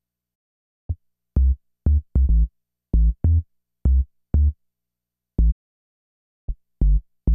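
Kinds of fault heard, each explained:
Digital broadcast dropout: the receiver lost usable frames and muted, so the sound fades within 20 ms to silence from 0.34 to 0.91 s and 5.50 to 6.50 s, then resumes later. Unlike analogue fading, no hiss fills the gap and nothing is replayed.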